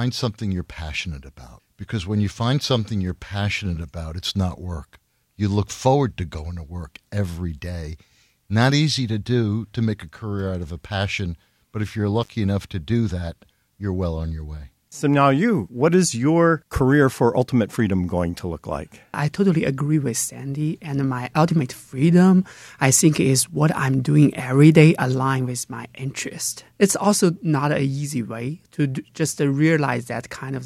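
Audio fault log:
12.22–12.29 s, intermittent contact: a loose connection opens for about 57 ms, dropping the sound to faint hiss; the waveform shows a near-flat gap with crackle spikes at both edges.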